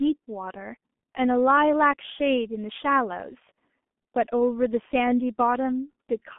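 Throughout, the speech runs through a G.723.1 codec. Its band spans 200 Hz to 3.5 kHz, with nothing above 3.7 kHz. A coarse, slowly updated voice model damages it heavily. It sounds muffled and hoarse, with blurred consonants, fitting a bitrate near 6 kbit/s.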